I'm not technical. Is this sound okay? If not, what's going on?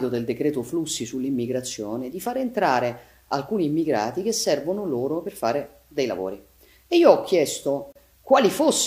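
No. At about 7.92 to 7.96 seconds the sound briefly drops out for roughly 31 milliseconds, a tiny hole with softened edges, then carries on where it stopped. This is a gap at a join of encoded pieces: separately encoded sections were stitched together, leaving their built-in padding silence in place.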